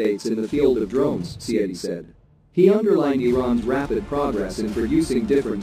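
From start to finish there's channel delay (doubling): one side arrives about 46 ms late, which fits a 2048-sample buffer, and once the two are folded to mono you hear a second copy of everything trailing right behind, like an even-level slapback.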